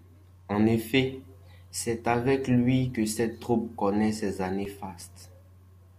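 CD scratch ticks run from 4.41 to 5.14 s in this speech clip, right after "cette troupe connaît ses": seven short ticks, each only a few milliseconds at most, spaced at a regular rate of roughly nine per second. That steady rhythm points to a scratch or blemish passing under the laser once per disc revolution, damaging more data than error correction can rebuild, so the player interpolates or mutes those samples and leaves a brief click each time.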